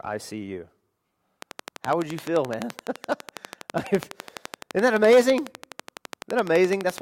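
From 1.42 s to 6.99 s a train of clicks ticks steadily through the speech and its pauses, 11.9 per second and roughly seventy in total. The clicks peak well above the speech and likely come from interference or a faulty connection or power supply. A spectrogram shows evenly spaced vertical lines, and the waveform shows regular sharp spikes.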